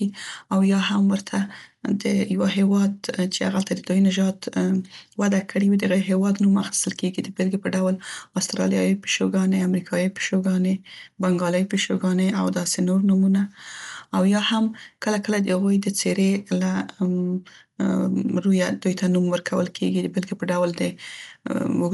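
From start to finish the speech sounds dull, with nothing above 11.5 kHz and a rough, fluttering grain around voiced tones, plainly audible damage that points to likely Dolby Digital compression at a low bitrate near 64 kbps. Starved spectral lines are replaced with filler noise.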